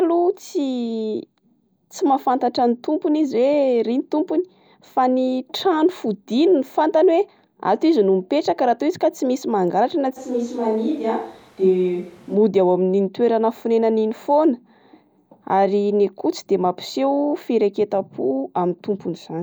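A switch to a distant microphone runs from 10.18 to 12.34 s in this speech recording. For that stretch the voice turns suddenly roomy and hollow, loses bass, drops by around 5 dB, and background noise rises to roughly 30 dB below the speech. The close sound returns just as abruptly at 12.34 s. The likely cause is that the close microphone's signal failed, leaving only a microphone placed further from the speaker.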